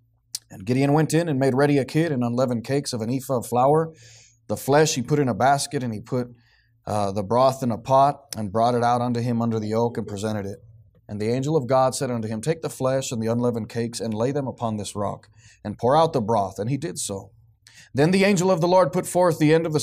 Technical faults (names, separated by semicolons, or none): none